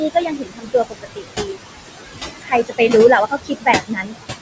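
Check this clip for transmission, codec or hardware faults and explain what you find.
The faults here come from noise suppression in the call's processing chain rather than from transmission or hardware: steady suppressor artifacts across the whole speech clip, plus three stretches where the suppressor also turned down speech. The room noise, sitting only about 7 dB below the speech, is what drives the suppressor so hard, and the call microphone processing leaves nothing above 8 kHz.

Noise suppressor artifacts run throughout. The suppressor estimates the steady background in each frequency band and pulls those bands down frame by frame, here by about 20 dB. With noise this close to the speech level, the estimate keeps shifting, so the residue pumps: it drops away in pauses and swells back under the speech.

Speech cut by the noise suppressor occurs from 0.1 to 1.58 s, from 2.42 to 2.9 s and from 3.27 to 4.15 s. 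Because the speech barely clears the background, the suppressor misjudged weaker parts of it as noise and attenuated them with the background, by up to about 21 dB in the first and last stretches and about 17 dB in the middle one. Roughly a second is affected in the first stretch, about a fifth of a second in the second and about half a second in the third. There, soft consonants and word endings sound swallowed or drop to a faint trace.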